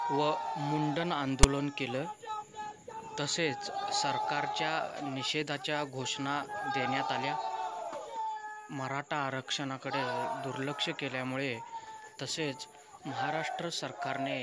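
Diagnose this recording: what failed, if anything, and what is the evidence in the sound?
Storage and playback stage: file tags played as audio. At 1.43 s, text metadata is decoded as samples, producing a hard-edged rasp. The waveform shows a one-sided offset block, and the spectrogram a broadband vertical stripe.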